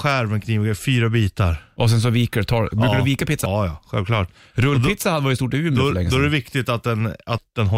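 A speech clip with one instance of damaged data in a compressed stream, at about 3.46 s. It falls between "du vika" and "ja självklart". Part of the encoded stream there was corrupted. The decoder could not read those frames properly and lost sync. It then had to search for the next valid frame header. The result is a brief disturbance where the audio breaks.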